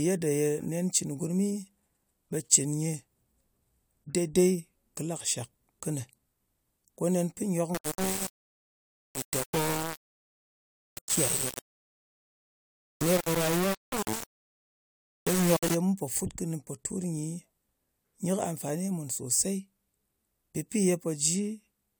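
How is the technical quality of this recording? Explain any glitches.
The recording has one clear fault: an eight-second stretch of heavy quantisation distortion.

From 7.75 s to 15.75 s, just before "ye mu pò fut", the speech turns coarse and grainy. This is low bit depth without dither, likely from the signal being rounded to around 4 bits with no dither applied. Because the rounding error tracks the waveform, the grit rises and falls with the speech and sits almost as loud as the speech itself. The quietest parts collapse to silence or sputter between levels.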